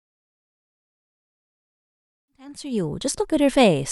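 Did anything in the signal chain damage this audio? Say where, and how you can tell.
No, nothing in the signal chain stood out as damaging on listening, and the gentle fade that begins around 2.5 s and completes by 3.37 s sounds like a deliberate edit.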